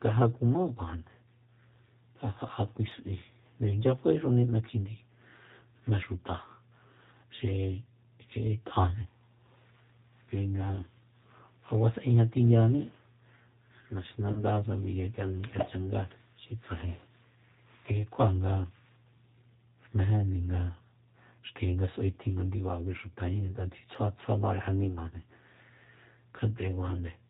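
From start to finish the speech runs through the G.729 codec, a low-rate scheme that models each short frame with a vocal tract filter, a pitch predictor and a few excitation pulses. That points to roughly 8 kbit/s. Nothing above 4 kHz survives, so the speech is band-limited and dull, and the coarse pulse coding gives it a plainly audible rough, synthetic edge.

From 14.33 to 14.45 s there is VoIP packet loss concealed by the speech codec. About 30 ms of audio never arrived, which fits three lost 10 ms frames, and the decoder filled the gap by extending its last pitch and filter settings at falling gain. The speech there turns into a short buzzy tone or coloured noise that fades, and because each frame builds on the one before, it stays weak or distorted for a moment after real packets resume.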